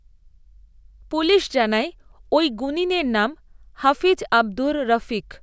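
No technical faults can be heard in this recording.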